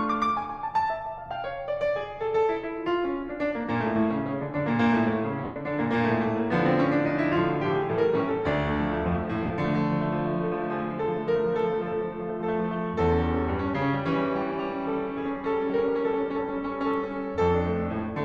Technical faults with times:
5.44-5.56 lost LE Audio frames
9.46-9.50 lost LE Audio frames

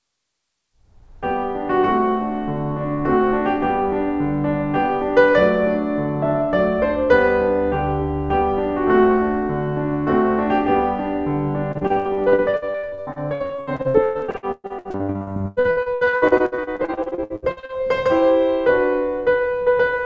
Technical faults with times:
11.72-17.72 repeated packet loss (robotic sound)

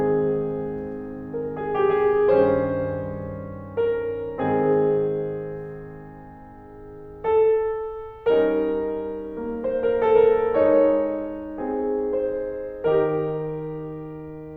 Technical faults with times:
none

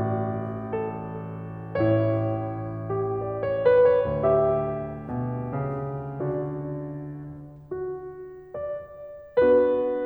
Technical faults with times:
none

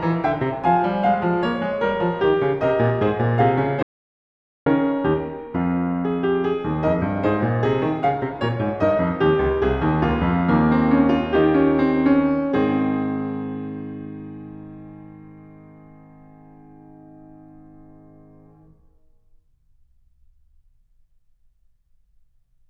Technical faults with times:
3.83-4.66 audio dropout to silence

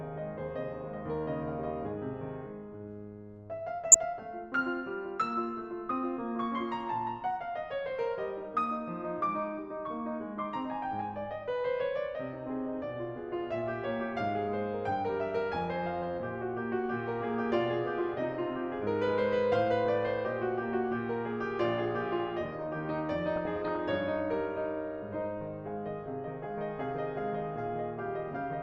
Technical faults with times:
0.00-28.63 MP2 compression
3.92-4.04 DAB burbling
23.36-23.78 DAB burbling

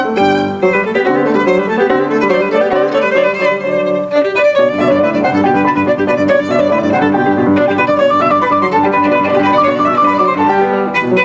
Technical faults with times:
0.00-11.24 gain pumping

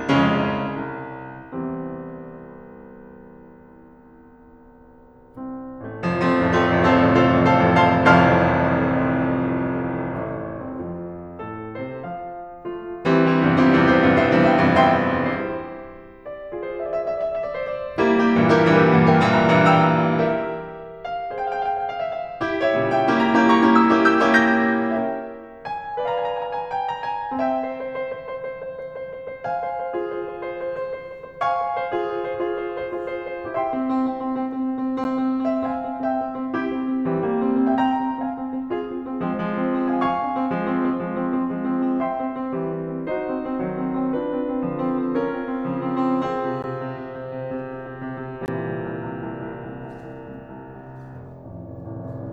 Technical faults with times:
35.04 block of digital silence
46.62 block of digital silence
48.46 block of digital silence

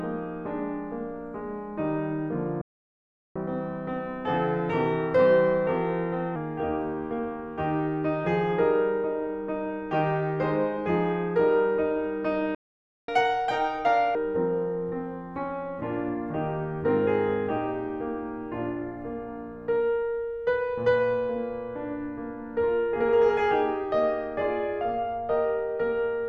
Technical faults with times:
2.61-3.36 playback stall
3.36-6.36 catch-up at higher speed
12.55-13.08 playback stall
13.08-14.15 catch-up at higher speed

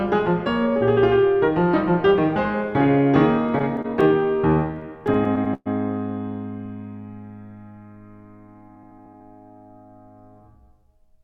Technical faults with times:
3.47-5.68 repeated stalls (stutter)

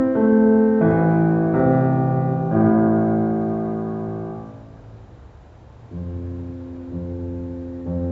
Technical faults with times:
none

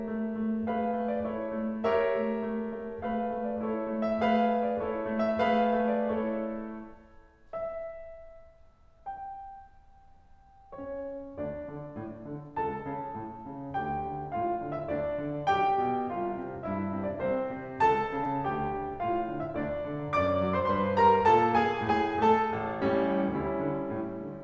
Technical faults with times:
18.24-18.27 short concealed packet loss

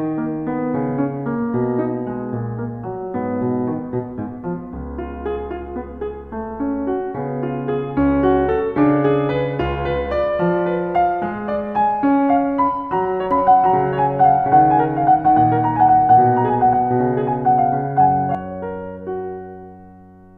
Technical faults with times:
13.31-18.35 doubled audio track

